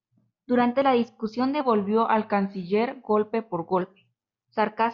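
A wrong sample rate affects this speech clip from 1.61 s to 3.81 s: the samples are being clocked out more slowly than they were captured, with no resampling. The slowdown to 0.919 times normal speed fits 48 kHz audio being played back at 44.1 kHz. Because speed and pitch are tied together when the rate is wrong, the voice in that stretch drops by about 1.5 semitones and drags, sounding lower and heavier before returning to its normal pace.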